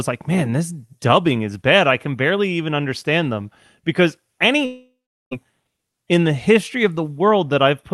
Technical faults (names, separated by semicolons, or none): long network dropout